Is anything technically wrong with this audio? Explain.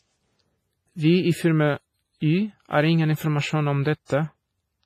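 Yes. The speech carries heavy damage throughout, most likely from WMA compression at a low bitrate of around 24 kbps. A transform codec with long blocks spreads its quantisation noise over tens of milliseconds and drops weak spectral lines, so the sound is ringing and washy, with hiss that swells and fades along with the voice. On a spectrogram nothing appears above 15.3 kHz, and the upper band looks patchy, with holes where quieter components were zeroed.

There is a pre-echo from 4.05 to 4.10 s, just after "ingen informasjon om". A sharp attack falls late in a coding block, so noise meant for the loud onset fills the quiet moment before it. This smears about 46 ms of hiss ahead of the attack, which sounds softened. In the waveform, a noisy ramp sits before the transient. On a spectrogram it appears as a broadband haze leading the onset.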